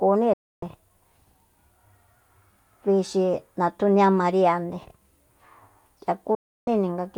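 At 0.33–0.63 s and 6.35–6.68 s, a digital broadcast dropout cuts the speech abruptly to silence; the receiver muted on lost frames, and that audio is gone.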